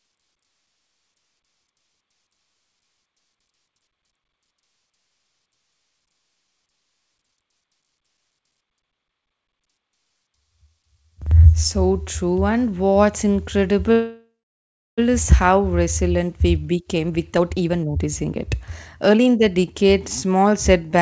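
At 13.92 s the speech stalls for about 1.06 s: a fading buzz, then roughly 670 ms of silence, before resuming at "is how resilient we". That's a call audio freeze, likely from packets held up in transit, so nothing is lost and there is just a gap.

Then the jitter buffer speed-up kicks in. Right after "is how resilient we", from 16.57 to 18.31 s, the speech runs at 136% speed with pitch unchanged, as short pitch-period chunks are trimmed. That takes out roughly 0.7 s and sounds clearly hurried. A milder pass from 18.70 to 20.99 s runs at 113% and removes around 0.3 s. Throughout, the G.722 call path shows no content above 8 kHz.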